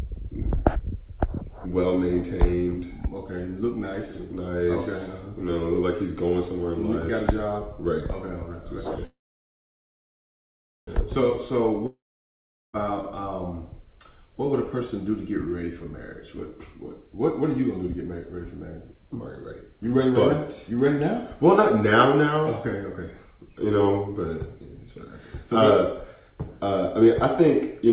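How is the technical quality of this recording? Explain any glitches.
The recording has three clear network glitches. It passes through a narrowband call channel, with nothing above 4 kHz, which points to G.711 A-law at 64 kbps.

A call audio freeze runs from 9.05 to 10.90 s. The sound stalls, and a fading buzz continues the last moment. It then settles into near-silence for about 1.74 s. The audio resumes exactly where it stopped, and nothing is lost. The likely cause is delayed packets emptying the jitter buffer. The receiver filled about 1.82 s, and that gap now sits inside the audio.

A long network dropout follows from 11.86 to 12.76 s. The last sound again trails off as a fading hiss. About 0.77 s of silence follows. When audio returns, it has jumped ahead. Roughly 0.87 s of the original never plays. This likely comes from packets that never arrived at all. Unlike the freeze, this stretch is gone for good.

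A jitter buffer speed-up begins at 14.52 s and lasts to the end. The audio runs at about 105% speed. Pitch stays the same, but the pacing sounds slightly hurried. The buffer had built up extra delay, probably after the earlier stall. To shrink it, the receiver kept cutting tiny pitch-period slices. Around 0.7 s was trimmed this way.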